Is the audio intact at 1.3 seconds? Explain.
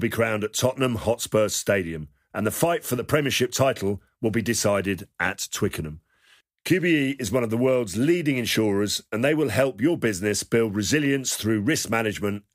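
Yes, the audio is intact at 1.3 seconds, with no fault at that moment.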